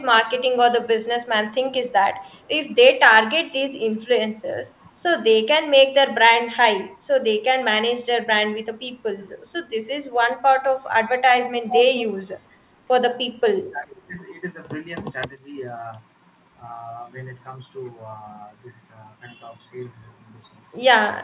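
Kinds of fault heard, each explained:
Speech suppressed in double talk: The voice briefly sinks by about 10 to 15 dB, in short gaps near 4.8, 9.2 and 10.4 s and a longer half-second dip at 13.6 s, likely because the echo canceller, facing both sides at once, turned everything down.
Echo leak: From 11.68 to 12.03 s a second copy of the voice trails about 420 ms behind, only about 5 dB quieter, likely because a loudspeaker end's echo canceller let some microphone pickup through and sent it back.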